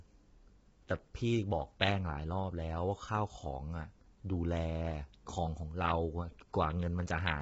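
From start to finish the speech sounds rough and grainy, with a hiss filling the gaps between the harmonics and nothing at all above about 7.8 kHz. That's likely low-delay AAC compression, the AAC-ELD flavour used for video calls, squeezed hard, in a way that fits a rate around 16 kbps. Its short frames can't separate the pitch harmonics cleanly, and at that rate the damage here is heavy.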